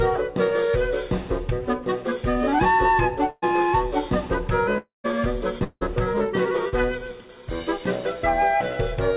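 From 3.30 to 3.44 s the sound smears into a held, fading continuation for about 120 ms, drops to silence for roughly 20 ms, then jumps ahead. This is a burst of packet loss: about 120 ms of audio never arrived, and the receiver stretched the last sound to cover it.

At 4.78 to 5.06 s and again at 5.64 to 5.83 s, the audio trails off into a dying buzz or hiss, goes silent (about 150 ms the first time, about 40 ms the second), and returns further on. Roughly 260 ms and 180 ms are gone. Both are likely long network dropouts, where the stream stopped arriving and the concealment faded out before the audio resumed.

Between 6.69 and 6.75 s there is a brief smear of about 40 ms as the audio blends back in. This is short concealed packet loss: a few hundredths of a second were rebuilt from the preceding sound. The whole clip passes through a G.711 mu-law call path and has nothing above 4 kHz.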